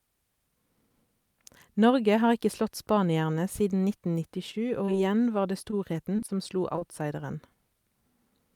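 From 4.51 to 4.97 s, just before "igjen var det", there is repeated packet loss with a robotic sound. Four gaps, none longer than 20 ms, are patched by extending the preceding sound. About 14% of the stretch is synthetic, giving a choppy texture.

At 5.71 to 5.74 s, a short stall from a late packet occurs. The jitter buffer ran dry, and the decoder held the last sound for about 18 ms until the packet arrived. Nothing is lost, but the sound briefly lingers with a faint buzz or dip.

Short concealed packet losses follow at 6.16 to 6.20 s and 6.26 to 6.30 s, just before "som slo". Two more come at 6.76 to 6.79 s and 6.79 to 6.83 s, immediately after it. Each drops about 20 ms of audio, bridged by continuing the prior sound, heard as brief smears or wobbles.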